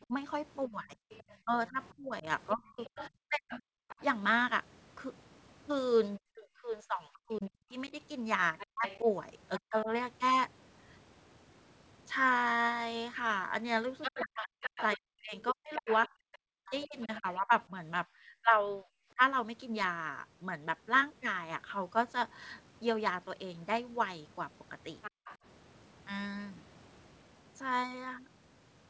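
From 0.05 to 3.73 s, 6.18 to 9.89 s and 14.15 to 19.21 s, speech is suppressed in double talk. The talker dips by up to about 40 dB, likely because the echo canceller mistook both sides for echo.

The other side's voice leaks through at 1.11 to 4.04 s, 8.58 to 9.6 s, 14.01 to 17.34 s and 25.02 to 25.37 s. It sits roughly 10 to 15 dB under the talker, likely uncancelled loudspeaker echo.

From 25.11 to 25.25 s, the background is gated by the echo canceller. The room sound drops by about 40 dB for a brief moment, then returns.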